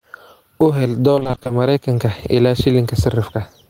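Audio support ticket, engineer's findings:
Gain pumping, whole clip: level pulled down on each loud sound, dynamics squashed, swing around 10 dB. Likely excessive input gain driving a fast limiter or compressor.

Repeated packet loss (robotic sound), 1.15 to 1.51 s: choppy speech. Gaps up to 20 ms patched by extending prior audio, concealment covering half the span.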